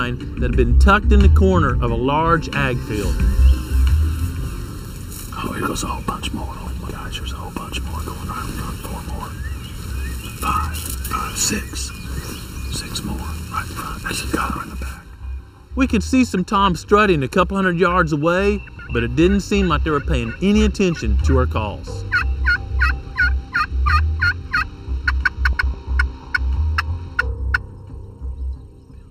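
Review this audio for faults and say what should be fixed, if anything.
The whole clip has a hollow, phasey colour from channel delay (comb filtering). One channel runs late by about 0.7 ms, so summing to mono carves evenly spaced notches starting around 700 Hz. Fix it by aligning the channels before any mono fold-down.

There are also three short spots of frames out of order, at 6.67–6.88 s, 18.68–18.90 s and 25.53–25.74 s. Each sounds like a garbled flutter, as two roughly 105 ms blocks swap places. That block length points to four codec frames per block. Make sure packets are reordered by sequence number before decoding.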